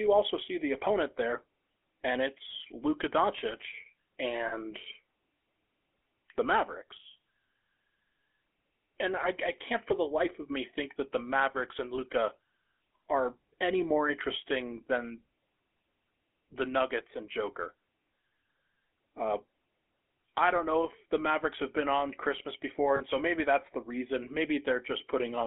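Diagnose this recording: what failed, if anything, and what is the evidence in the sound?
GSM full-rate codec, throughout: the speech has the buzzy, gravelly roughness of this codec, plainly audible, and sits in a band of roughly 300 Hz to 3.4 kHz. The codec stage rebuilds the voice from a vocal-tract model driven by a sparse pulse excitation, consistent with 13 kbps GSM full rate.

Lost GSM frames, at 4.48 to 4.54 s, 11.96 to 11.99 s, and 22.96 to 23.01 s just before "so maybe that's the": short rough, metallic rings, 40 ms, 20 ms and 40 ms long. At the network stage, the decoder repeated the last good frame's settings to fill each gap.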